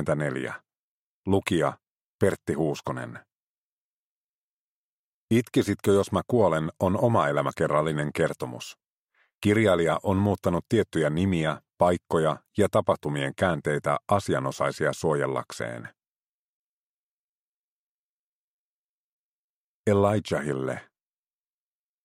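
No technical faults are audible.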